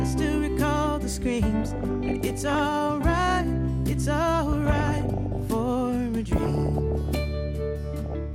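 DAB burbling occurs at 1.60–2.59 s, 4.52–5.51 s, 6.36–7.16 s and 8.01–8.14 s. Bit errors of about 0.7 to 1 percent corrupt sub-band samples and scale factors frame by frame, giving short blips of noise and sudden level jumps in single sub-bands.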